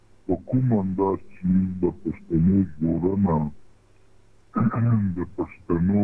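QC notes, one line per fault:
Throughout, wrong sample rate: the sound runs at 0.69 times speed and 6.45 semitones low. This fits 32 kHz audio played at 22 kHz unconverted.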